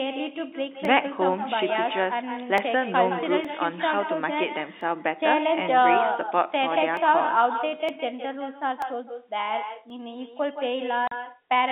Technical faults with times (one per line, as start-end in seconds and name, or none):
0.00-11.71 echo with no canceller
0.85 dropped samples
2.58 dropped samples
3.45 dropped samples
4.81 dropped samples
6.97 dropped samples
7.89 dropped samples
8.82 dropped samples
9.90 dropped samples
11.07-11.11 packet loss filled with silence